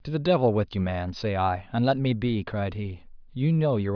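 Listening carefully to the speech, nothing stood out as a technical problem at any point.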